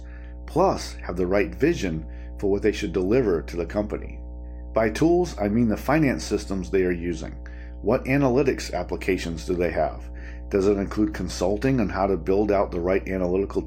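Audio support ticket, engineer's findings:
Steady low tone under the speech for the whole clip, fairly prominent, around 10 dB below the speech level. Mains hum at 60 Hz: ground loop or nearby transformer coupling power-line current into the signal path, audible as a continuous low drone.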